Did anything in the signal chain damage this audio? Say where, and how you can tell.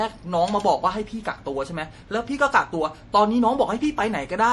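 Yes, at the codec stage: throughout, nothing survives above 11.5 kHz, and the speech carries a plainly audible watery, swirling texture with smeared onsets. This is likely MP3 compression, consistent with a low bitrate near 48 kbps, where the encoder drops treble and toggles weak frequency lines between frames.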